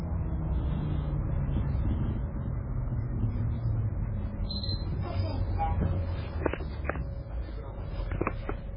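MP3 compression runs through the whole clip, and the damage is heavy. Nothing reaches above about 5.2 kHz, so the treble is simply missing. The swirly, watery texture comes from weak frequency lines dropping in and out between frames, and the onsets are smeared, likely from an encoder starved at around 16 kbps.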